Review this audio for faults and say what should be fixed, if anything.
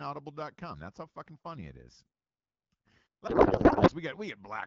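A codec payload misread runs from 3.27 to 3.92 s. For that stretch the speech turns into garbled noise and warble that barely follows it. The sender packs the AMR-WB frames octet-aligned, but the receiver unpacks them as bandwidth-efficient. So every field lands in the wrong place.

To prevent it, make both ends negotiate and use the same AMR payload format.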